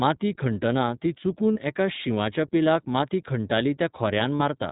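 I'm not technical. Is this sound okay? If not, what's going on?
No. Two related problems are audible in this speech.

The first runs through the whole clip. It has been squeezed through the iLBC codec, a compression scheme used for internet phone calls. It keeps only the lower part of the sound, so everything above 4 kHz is gone and the voice sounds muffled, like a phone line. The way it rebuilds the voice adds a slightly rough, synthetic edge. Here that damage is plainly audible.

The second problem is lost iLBC frames. The audio travels in small chunks, and this sounds like chunks of about 20 ms each. Two chunks went missing twice: from 1.53 to 1.57 s, and from 4.36 to 4.42 s. Each gap is about 40 ms. The decoder fills each hole by repeating the last bit of voice with some noise mixed in. You hear a brief held, buzzy or breathy sound. Because each chunk stands on its own, the voice comes back cleanly right after.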